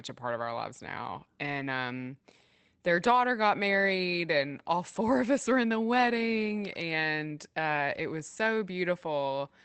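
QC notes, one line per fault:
1.59–1.61 s, 4.95 s, 7.03 s and 7.93–7.99 s: lost packet rebuilt from error correction. There is no gap. Short stretches turn rougher and noisier: after "of our lives now", between "got married and all" and "of us were in", at 7.03 s, and just before "was so". Each lost 20 ms packet was replaced by the lower-bitrate copy carried in the next packet, and the last event covers two packets (40 ms). The call path ran Opus at 24 kbps with audio limited to 8 kHz.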